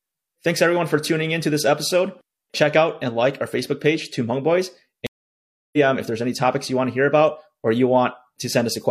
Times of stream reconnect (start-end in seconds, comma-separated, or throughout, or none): 5.07-5.77